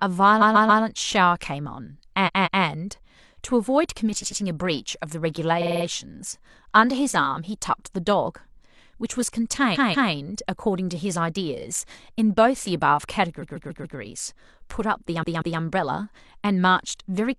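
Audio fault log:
0.38–0.79, 2.23–2.60, 4.18–4.37, 5.58–5.82, 9.71–10.08, 11.57–11.62, 13.38–13.94, 15.19–15.56 s: repeated frames. Blocks of 46 to 186 ms replay one to five extra times, giving a stuttering loop. Each event adds 46 to 557 ms.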